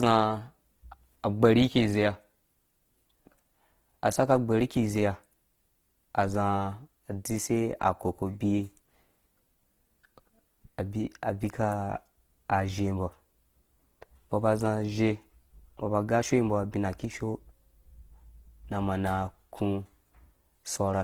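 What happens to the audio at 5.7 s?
At 5.7 s the speech carries the same Opus compression damage heard through the whole clip: grainy, rough texture on voiced sounds and a noise wash where fine detail should be, rather than the watery swirl of MP3. This is likely Opus in its CELT music mode starved of bits, filling bands with folded or noise energy, which fits a rate near 16 kbps. The bandwidth stays full, reaching about 20.2 kHz, so nothing sounds muffled.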